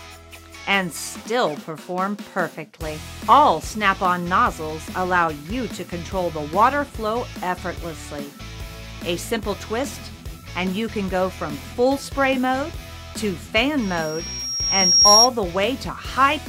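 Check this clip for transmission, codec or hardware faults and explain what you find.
There's one fault, a loudspeaker feedback squeal from 13.82 to 15.29 s. A mic is hearing its own speaker, and around 5.6 kHz the loop gain tips past one, so a thin tone swells over roughly a second and a half to about 10 dB above the rest of the sound.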